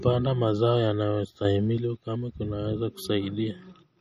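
From the start the speech carries MP3 compression artefacts: the treble stops dead at 15.1 kHz, and weak frequency components flicker in and out between frames, giving a watery, swirly texture and metallic edges on s sounds. The damage is plainly audible, which fits a low bitrate of around 40 kbps.

At 1.45 s a sudden gain jump lifts the speech and background noise together by about 6 dB, with no ramp, until 1.78 s, when the level drops back just as abruptly. A stepwise digital gain change applied without smoothing is the likely cause.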